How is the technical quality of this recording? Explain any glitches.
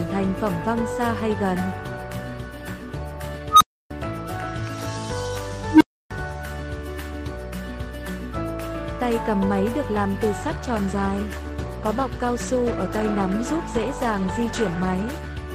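The recording has three clear problems: two filter blow-ups early on and a stretch of degraded coding at the end.

The first two are an unstable filter. At 3.49 to 3.91 s, a tone around 1.5 kHz swells out of nowhere in about 0.11 s, hits clipping, then drops into roughly 0.3 s of silence. It happens again at 5.71 to 6.11 s, this time a lower tone around 300 Hz building in about 0.1 s, with the same 0.3 s gap after. That's a recursive filter with bad coefficients feeding back on itself until the numbers overflow and it resets.

The third is a call bitrate drop from 10.42 s to 15.45 s. The encoder falls from 32 to 15 kbps and stays at the low rate for nearly 5 s. With that few bits it codes much more coarsely, so everything from there to the end sounds rougher and watery, which is the bandwidth estimate pulling the rate down.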